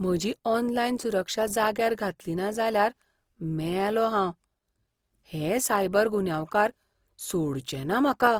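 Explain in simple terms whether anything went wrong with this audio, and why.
Something did go wrong, and it lasts from the first second to the last. The speech sounds rough and grainy, with a fizzy edge on every sound. This is most likely Opus compression that squeezed the audio hard to save space. When the encoder runs short of room, it fills the gaps with copies of lower sound or with noise. The high end is still there, so nothing sounds muffled. It just sounds coarse.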